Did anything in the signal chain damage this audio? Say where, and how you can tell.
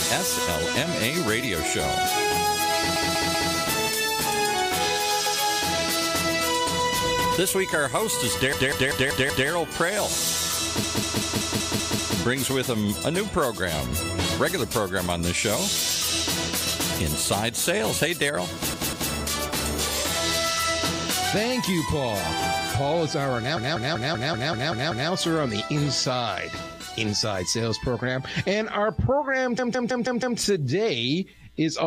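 Yes. The sound stutters, one short block looping, at 2.96–3.54, 8.53–9.49, 10.83–12.18, 18.74–19.12, 23.57–25.10 and 29.58–30.38 s. These are repeated frames in the stored or sent codec stream: a 192 ms block (160 ms at the end) replayed two to eight extra times.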